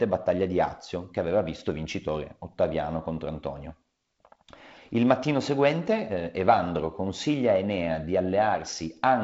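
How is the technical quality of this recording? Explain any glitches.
No glitches turn up anywhere in this recording; what you hear is just the character of G.722 wideband telephone coding at 48 kbit/s, with nothing above 7.7 kHz and only a light coding texture.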